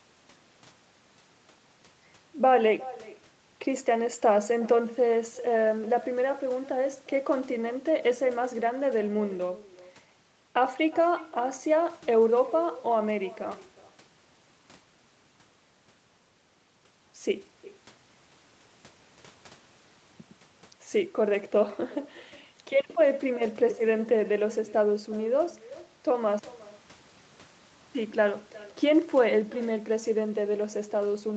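Speech recorded over a call band-limited to 8 kHz carries echo with no canceller throughout: the far end's loudspeaker feeds its microphone, returning a copy about 20 dB down, roughly 0.4 s late, visible as faint repeats trailing each word on the spectrogram.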